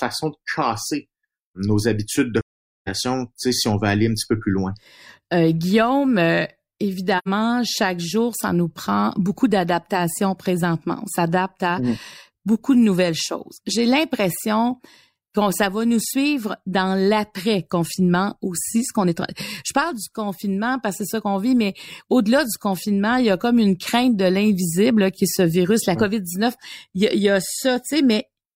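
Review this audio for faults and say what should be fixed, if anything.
AAC frame loss with muting leaves two soft-edged silent holes: 2.40 to 2.89 s, after "casser nos habitudes de", about 0.47 s, and 7.18 to 7.28 s, before "chaque jour ça nous", about 85 ms. The decoder zeroed the missing spectra, so overlapping windows fade the sound out and back in. The longer gap fits roughly eleven lost frames and the shorter one two. A spectrogram shows full-band blank columns with tapered edges, and the waveform narrows smoothly to flat. Better transport protection, such as retransmission or forward error correction, would prevent it.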